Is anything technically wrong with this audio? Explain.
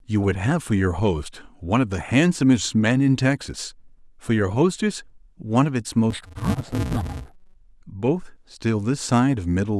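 Yes, there's one problem. From about 6.11 to 7.56 s the speech turns dull and robotic, with a steady buzz running under it. That's interleaved audio read as planar: each short block of alternating left and right samples gets split down the middle instead of deinterleaved, so both halves play at half speed. Blocks here last about 5.33 ms, which fits a 128-sample block, so the buzz sits at the 188 Hz block rate and there's no obvious octave drop.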